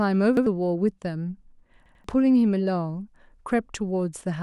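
A speech clip with two repeated buffer stutters. At 0.37 s, a piece of about 93 ms plays twice. At 1.86 s, it plays three times, with hard joins. New audio arrived late, so the device replayed its last buffer, which fits a 4096-sample size. Roughly 0.1 s and 0.2 s of speech are lost.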